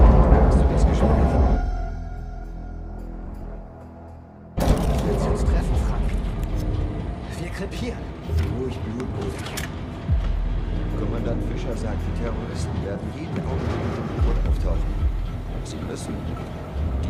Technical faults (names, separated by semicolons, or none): frames out of order